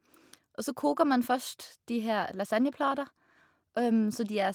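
Nothing in the speech stood out as a technical fault on listening.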